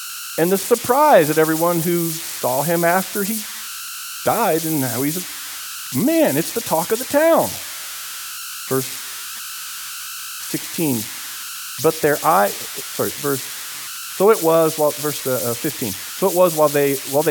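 Converter idle tones run throughout the clip. A delta-sigma converter working without dither locks into repeating bit patterns whenever the speech level drops low, and those patterns produce a tone instead of random noise. Here it sits around 1.5 kHz, only about 10 dB below the speech, so a thin whistle or chirp rises in the pauses and a grainy, buzzing texture clings to the quieter syllables.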